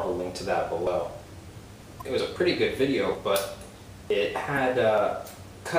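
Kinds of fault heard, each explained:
Audio missing between chunks: the sound skips forward abruptly at 0.87, 2.2, 3.15, 4.1 and 4.98 s, each time losing about fifty milliseconds with the two sides butted together and no gap of silence between them. The skips recur at roughly one-second spacing, which points to audio handled in 1-second blocks, and the likely cause is a short stretch dropped each time one block is closed and the next opened.
Damaged data in a compressed stream: two brief glitches occur, from 1.98 to 2.02 s and from 4.54 to 4.58 s, each lasting about 44 ms. Here the compressed data was corrupted, so the decoder could not read those frames correctly, lost its place in the stream and had to find the next valid frame header before normal decoding resumed, producing a short blip in place of the intended sound.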